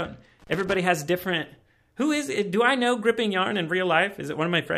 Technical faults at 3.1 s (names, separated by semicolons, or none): none